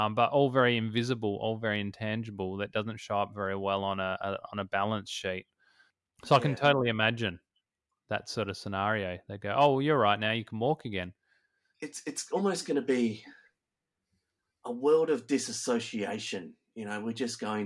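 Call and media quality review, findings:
No audible faults found in the speech; nothing to trace to any component of the call path.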